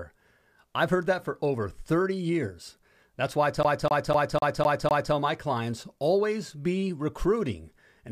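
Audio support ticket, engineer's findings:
CD stuck on one turn, 3.63 to 5.14 s: same quarter-second chunk (about 251 ms) of speech loops six times with little mutes. Scratch kicking the laser back a track each rotation.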